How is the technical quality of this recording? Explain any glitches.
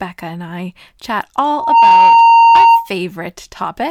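The recording is marred by one serious glitch. A loudspeaker feedback squeal runs from 1.50 to 2.90 s, just after "and I chat". The microphone re-amplifies its own loudspeaker until a 922 Hz tone swells within about a third of a second to roughly 15 dB above the speech. That swelling onset, rather than an instant steady tone, distinguishes it from an interfering whistle.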